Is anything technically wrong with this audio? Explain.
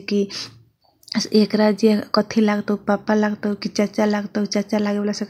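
No, nothing is technically wrong.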